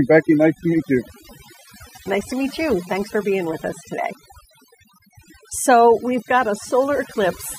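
Speech recording with overdone noise removal throughout: aggressive band gating leaves a reduced background with twinkling specks, seen on a spectrogram as scattered isolated bins in dark gaps.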